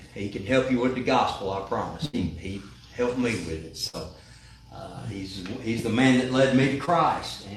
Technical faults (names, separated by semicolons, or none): burst of packet loss; short concealed packet loss